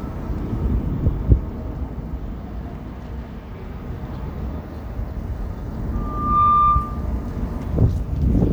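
A recording of everyday sounds with a loudspeaker feedback squeal from 5.93 to 7.12 s. A steady 1.2 kHz tone swells over about half a second to roughly 10 dB above everything else, because the mic's hearing its own speaker and the loop's running away at that frequency.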